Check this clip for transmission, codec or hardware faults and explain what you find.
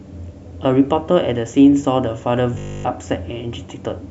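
One fault. From 2.55 to 2.85 s the speech collapses into robotic sound from repeated short buffers: a rigid, metallic 50 Hz buzz that loosely tracks the speech. This likely comes from starved playback repeating a 20 ms block throughout while the real audio is skipped.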